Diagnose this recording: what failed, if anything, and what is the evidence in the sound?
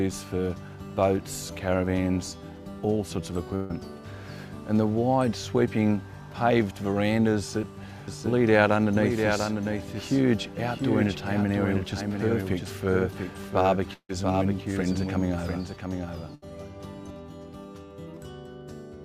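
Network stage, burst of packet loss: at 3.55–3.71 s and 16.35–16.44 s, lost packets are concealed by stretching the last sound for about 140 ms and 70 ms, then audio resumes with that stretch missing. On a spectrogram, smeared frozen bands fade before an abrupt restart.

A doubled audio track runs from 8.08 to 17.10 s. A full-band copy trails the original by roughly 0.7 s, about 5 dB quieter, with no reverberant colour. This is likely a second capture path or an edit mixing two offset copies. The waveform shows repeated shapes shifted in time, starting and ending abruptly.

A long network dropout, likely a stall in packet delivery, occurs at 13.93–14.11 s. About 160 ms of audio is lost. Concealment extends the last sound, which fades into roughly 80 ms of near-silence before the audio returns. A spectrogram shows a fading smear, then a blank gap.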